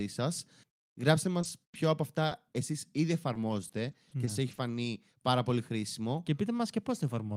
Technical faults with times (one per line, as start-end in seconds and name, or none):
1.41-5.27 scattered short gaps